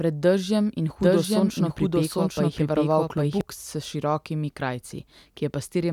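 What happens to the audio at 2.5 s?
At 2.5 s you're in the middle of a doubled audio track, running from about 1.01 to 3.41 s. A second copy of the speech, roughly as loud as the original, trails it by about 0.7 s with no reverb tail, likely from a slower capture path. It cuts in and out abruptly.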